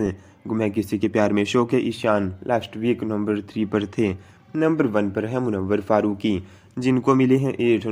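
Nothing in the audio stood out as a technical fault on listening.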